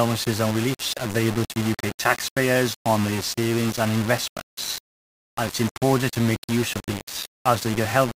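Speech, carrying grainy distortion throughout that tracks the signal, with quiet passages sputtering or dropping out, likely low bit depth without dither, rounded to about 4 bits.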